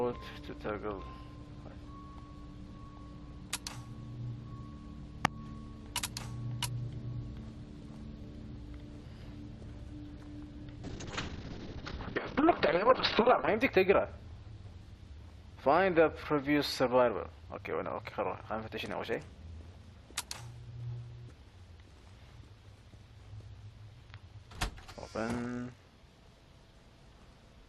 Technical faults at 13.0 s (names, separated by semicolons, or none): call bitrate drop